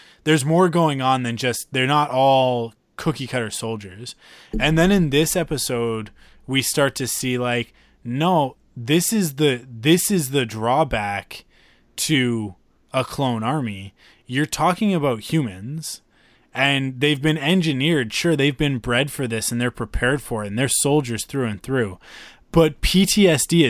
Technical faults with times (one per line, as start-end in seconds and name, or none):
none